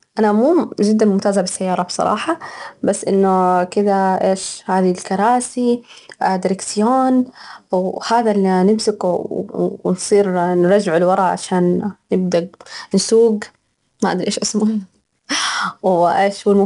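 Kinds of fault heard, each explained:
4-bit ADPCM compression: each sample is coded as a 4-bit step from a predicted value, so quantisation noise rides on the speech level as a plainly audible gritty hiss. Nothing reaches above 10.6 kHz, which fits a rate near 89 kbps.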